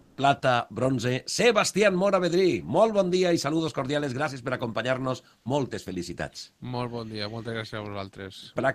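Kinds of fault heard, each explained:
Comfort noise in place of the background: right at the start, from about 0.01 to 0.13 s, the quiet background (about 41 dB below the loud parts) gives way for roughly 120 ms to a smooth, detail-free hiss about 4 dB off the real background's level before the true background returns. This is likely discontinuous transmission in a codec such as Opus DTX, where the sender pauses during silence and the receiver fills the gap with synthetic, roughly shaped noise.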